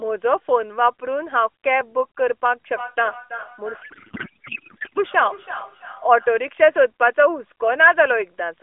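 From 3.82 to 4.99 s the speech turns into garbled, warbling noise. This is a codec payload misread: octet-aligned AMR frames were decoded as bandwidth-efficient, scrambling every field.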